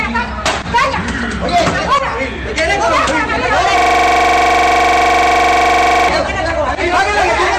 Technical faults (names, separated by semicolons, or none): system hang loop